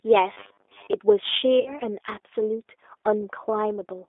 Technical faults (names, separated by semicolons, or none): G.729 codec; robotic sound from repeated short buffers; VoIP packet loss concealed by the speech codec